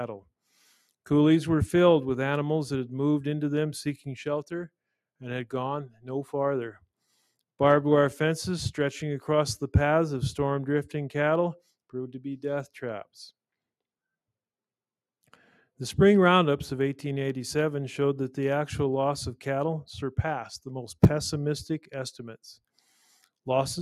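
At 5.88 s the sound is cut by the noise suppressor. It lasts until 6.07 s, roughly a fifth of a second. The suppressor mistook this stretch for background noise and pulled it down harder than its surroundings. The deepest dip is about 12 dB. It sounds like a brief sag in level, as if the sound ducked away and returned. Sustained or fading parts lose body. Sharp onsets pass through largely intact.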